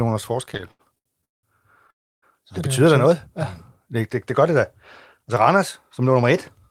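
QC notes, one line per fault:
0.45–1.45 s, repeated stalls (stutter): packets kept reaching the receiver late, so the jitter buffer ran dry 12 times, longest wait 184 ms. Each gap was bridged by stretching the preceding sound, 437 ms in all, nearly half the span, so the speech drags and stutters without losing anything.
1.90–2.24 s, call audio freeze: packets were likely held up in transit and the buffer emptied, so the receiver extended the last sound briefly before fading to near silence for about 300 ms. Speech then resumes where it stopped, a 318 ms gap inserted with nothing lost.
6.01–6.64 s, jitter buffer speed-up: the buffer was holding more audio than its target, so the receiver trimmed short pitch-period slices repeatedly, roughly 50 ms overall. The speech plays about 7% faster at unchanged pitch and sounds slightly hurried.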